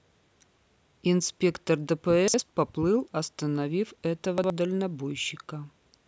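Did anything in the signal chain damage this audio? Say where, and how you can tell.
Yes. Chunks out of order at 2.28–2.40 s and 4.38–4.50 s. Each 60 ms chunk plays one slot late, causing jumbled speech. This points to buffer or network reordering.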